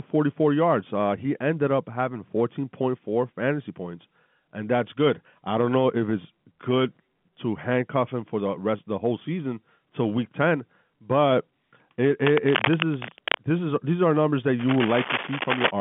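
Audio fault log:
12.25–13.46 s and 14.59–15.71 s: cable scratch noise. Two dense, uneven bursts of scratching and rustling, each just over a second long, ride over the telephone-band speech at nearly its own level. The likely cause is a worn cable or connector being moved, rapidly changing its contact resistance.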